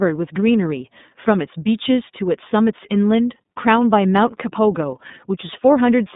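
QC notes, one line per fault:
Throughout, iLBC codec: the speech has passed through a narrowband VoIP coder working in 30 ms frames, each coded without reference to the one before, at a rate that fits 13.33 kbps, so content above about 3.7 kHz and below 150 Hz is gone, leaving a muffled, telephone-like voice with a plainly audible rough, synthetic edge.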